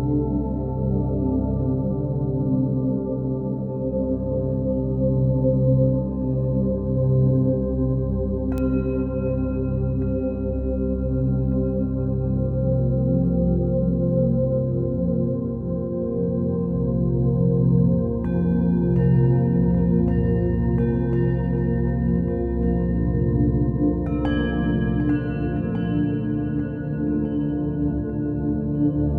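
A bit error spike occurs at 8.58 s. A single sample has had one bit flipped, whether in memory or while crossing a digital link, so its value leaps by a power of two and snaps straight back on the next sample. The excursion reaches about -14 dBFS and has no relation to the surrounding audio. Because it lasts only one sample, its energy spreads across the whole spectrum, and it is heard as one sharp tick.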